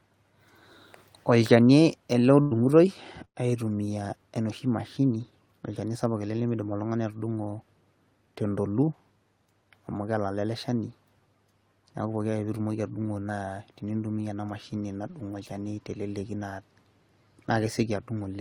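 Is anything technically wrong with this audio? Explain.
Yes, there are two related network playback faults: two bursts of packet loss, each followed by a jitter buffer speed-up.

The burst of packet loss at 2.41 to 2.54 s covers missing audio with about 95 ms of the last sound stretched and faded. The 60 ms that never arrived is skipped, and the stream resumes 35 ms later. The second burst, at 3.25 to 3.47 s, conceals for 100 ms, then drops to 80 ms of silence. Again 60 ms is lost, with a 40 ms delay shift. You hear the last sound held and dying away, then a jump. On a spectrogram, the stretched sound fades out, with a blank column in the second event.

The jitter buffer speed-up at 2.55 to 2.85 s (111% speed, around 40 ms removed) and at 5.23 to 5.50 s (115%, about 50 ms) comes from the buffer shedding the surplus delay left by those bursts. It cuts out short whole pitch periods repeatedly, so the speech sounds hurried while keeping its pitch. 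On the spectrogram, harmonic spacing stays constant but syllables crowd closer together. The waveform shows periods spliced end to end.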